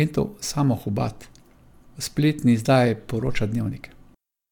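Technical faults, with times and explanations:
No technical faults can be heard in this speech.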